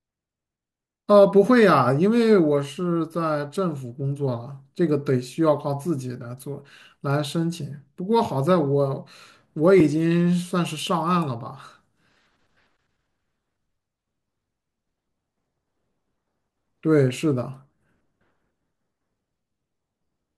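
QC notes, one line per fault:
9.80 s, underrun with held sample: the output briefly ran dry and the converter froze on its last value for about 1.45 ms, which fits a 64-sample stall at 44.1 kHz. The waveform flattens on that held value, so the speech pauses briefly. No audio was lost; playback picked up exactly where it stopped, so the join back into the signal is soft rather than a sharp click.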